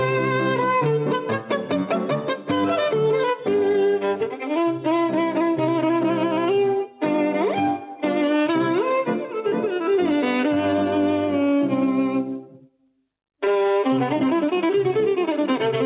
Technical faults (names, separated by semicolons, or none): none